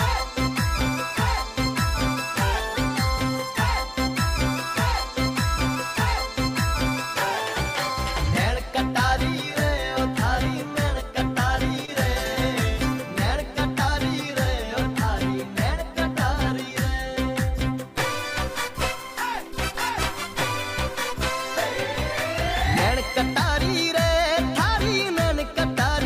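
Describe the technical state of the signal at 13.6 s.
At 13.6 s the signal is intact, with no dropout, distortion, glitch or other audible fault.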